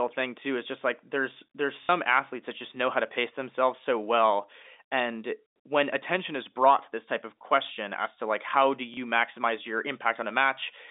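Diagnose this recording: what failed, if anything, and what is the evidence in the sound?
The network failed, with packet loss and the last packet repeated. Just after "just like there's there's", 1.83 to 1.89 s stutters robotically for 60 ms. After "to like how do", 8.94 to 8.97 s repeats briefly. That fits 30 ms packets. The receiver replayed stale audio over the narrow telephone band.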